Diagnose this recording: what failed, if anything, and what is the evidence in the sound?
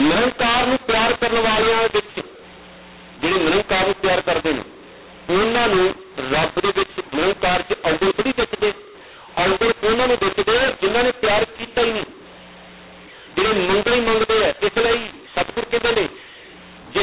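The mu-law and A-law mix-up sits at the codec stage and runs through the whole clip. The speech sounds harsh and gritty, with levels scrambled and pauses filled with hiss. The samples were written as mu-law but decoded as A-law, which misreads each logarithmic code and lifts near-silent samples well above zero.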